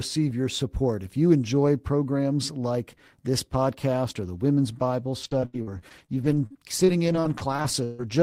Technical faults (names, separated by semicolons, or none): repeated packet loss (robotic sound)